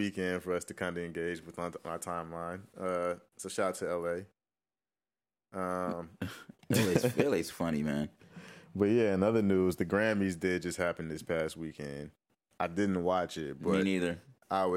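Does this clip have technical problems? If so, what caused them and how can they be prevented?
No, nothing in this speech clip stood out as a technical problem on listening, so there is nothing to trace to a cause or prevent.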